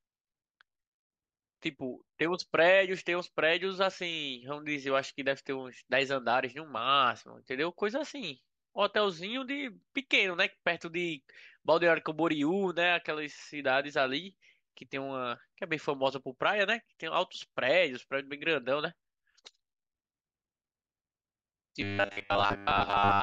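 From 21.81 s to 23.22 s, the speech turns into a robotic sound from repeated short buffers. The voice becomes a stiff, metallic buzz locked at 100 Hz. It still traces the rough shape of the words. The likely cause is new audio arriving too rarely. The playback then loops the last fragment, which fits a 10 ms buffer, and the real speech in between is skipped for most of this stretch.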